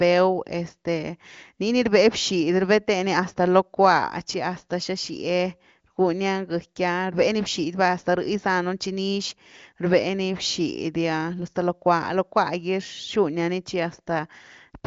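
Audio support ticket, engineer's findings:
Nothing to flag here: the speech is carried over the AMR wideband (HD Voice) codec at 23.05 kbit/s, with content stopping at about 7.5 kHz, and no faults turned up on listening.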